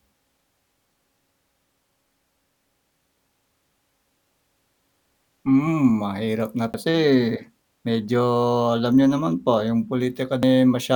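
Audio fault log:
6.73 s and 10.42 s, CD skip: The laser tracking lost its place on the disc's spiral and landed on a different turn, so the player muted briefly and resumed from another point in the track. Each is heard as a tick with a momentary dropout of roughly 10 ms at 6.73 s, just after "mahirap na", and only a few milliseconds at 10.42 s, followed by an abrupt discontinuity in the speech where playback picks up out of sequence.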